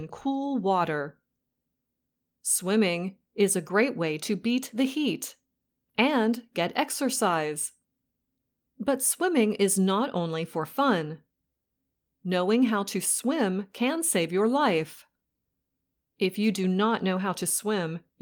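Nothing in this recording trips the ear: no dropouts, glitches or other technical faults turn up anywhere in the speech.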